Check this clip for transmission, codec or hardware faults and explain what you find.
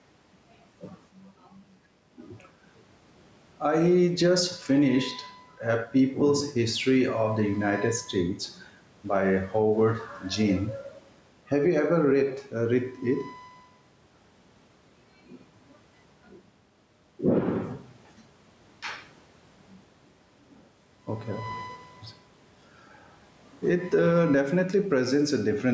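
One fault runs through the whole recording: gain pumping in the speech.

Gain pumping, throughout the clip: the level swings by roughly 5 dB in step with the talker. The likely cause is an input gain set far too high for the microphone, with a fast limiter or compressor pulling it back each time a loud syllable arrives. The room noise sits about 38 dB below the speech. The speech sounds flattened and squashed, with loud and quiet parts pushed close together. The call's microphone processing, which leaves nothing above 8 kHz, is not a fault.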